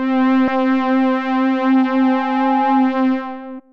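At 0.47 s and again from 3.58 to 3.60 s, damaged data in the compressed stream makes the decoder lose sync, producing brief glitches. From 1.62 to 3.02 s a loudspeaker feedback squeal at 831 Hz swells over about a second to roughly the level of the sound itself.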